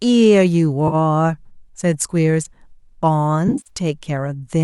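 AAC frame loss with concealment at 0.88–0.95 s and 3.48–3.70 s: missing frames are rebuilt from the last good spectrum, giving a 40 ms smeared patch, then scattered noisy gaps.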